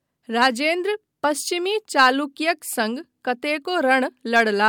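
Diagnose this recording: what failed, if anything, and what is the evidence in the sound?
No fault is audible here.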